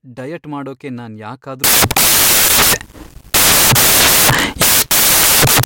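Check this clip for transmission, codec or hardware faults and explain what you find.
One decoding fault is present in the speech. From 1.64 s to 5.64 s, just after "ಡಯಟ್ ಮಾಡೋಕೆ ನಾನ್", the samples are built from the wrong bytes. The reader assembles each sample's bytes misaligned or in the wrong order, so the rapidly changing low bits become the dominant part of every value. The speech turns into loud, harsh broadband noise, close to white on the louder sounds.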